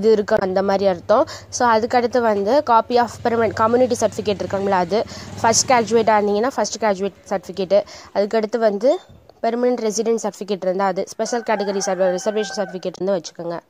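Damaged data in a compressed stream appears at 0.35 to 0.42 s and 12.95 to 13.02 s. Corrupted bytes derail the decoder. It loses sync, producing a brief blip.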